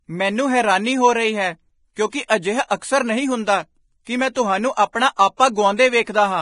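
Vorbis compression runs through the whole speech clip, and a low-bitrate Vorbis encode is the likely cause. Nothing survives above 10.6 kHz, and the treble that remains is so coarsely quantised that it turns to hiss and grain, which fits a bitrate near 29 kbps.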